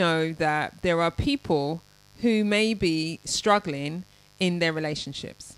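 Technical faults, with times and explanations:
Throughout, mains buzz: interference from the 50 Hz supply, entering through switching spikes twice per cycle, leaks into the speech path, adding a steady, raspy buzz with harmonics climbing into the kHz range, sitting roughly 30 dB below the speech.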